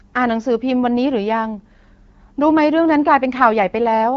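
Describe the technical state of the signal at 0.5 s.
At 0.5 s the signal is intact, with the speech passing cleanly through the AMR wideband (HD Voice) codec at 12.65 kbit/s.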